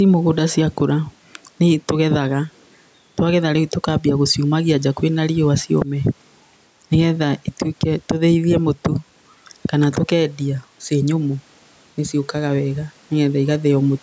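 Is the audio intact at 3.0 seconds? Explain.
No. At 3.0 seconds the speech is affected by gain pumping, which runs through the whole clip. The level swings by around 5 dB. Loud and soft passages sit closer together than they should, so the sound feels squashed. The likely cause is input gain set far too high, with a fast limiter or compressor pulling it back on every peak.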